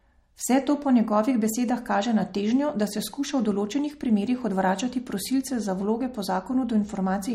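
From start to finish the speech carries plainly audible MP3 compression artefacts, likely from encoding at a low bitrate, which fits roughly 48 kbps. Nothing is present above 16.1 kHz, where the encoder has cut the treble outright. Below that, weak frequency components drop in and out from frame to frame as bits run short, giving the sound a watery, swirling texture with metallic chirps on sibilants and smeared consonant onsets.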